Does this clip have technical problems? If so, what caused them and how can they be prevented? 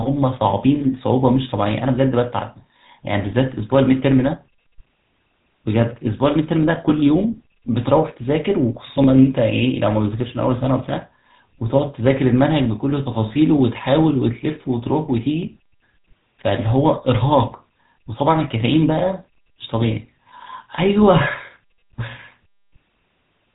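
Yes. The speech carries plainly audible GSM full-rate codec damage from start to finish: a buzzy, gravelly roughness with nothing above 3.8 kHz. The codec rebuilds the vocal tract from a filter model and excites it with a sparse, regularly spaced pulse train, so the fine texture of the voice is replaced by a grainy buzz. That buzz, rather than just muffling, separates it from plain narrowband filtering. The damage points to a phone call at roughly 13 kbps. Prevent it by recording locally or using a wideband codec.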